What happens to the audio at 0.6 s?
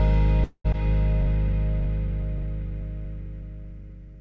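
A call audio freeze runs from 0.44 to 0.66 s. Incoming packets were likely held up in transit, leaving the jitter buffer empty, so the receiver stretched the last sound into a fading buzz or hiss for about 205 ms, ending in roughly 50 ms of silence. When the audio returns it picks up exactly where it stopped, with nothing lost but everything after now running about 0.2 s late. The G.722 call path keeps the band below 8 kHz throughout.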